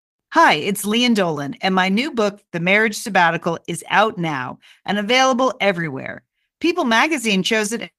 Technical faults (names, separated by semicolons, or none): short stall from a late packet